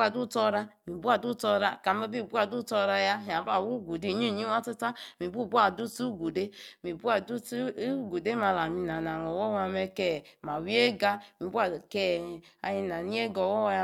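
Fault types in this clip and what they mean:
Overlap-add ripple: The speech carries a metallic buzz from start to finish, in which the level pulses around a hundred times a second with a swing of about 6 dB. The audio was split into windowed frames and rejoined with an overlap whose windows do not add up to a steady gain, so the loudness dips and recovers once per frame, putting the frame rate into the sound as amplitude modulation.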